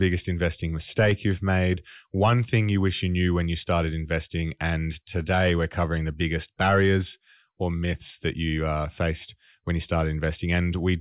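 Listening to the speech recording, nothing stood out as a technical problem at any point.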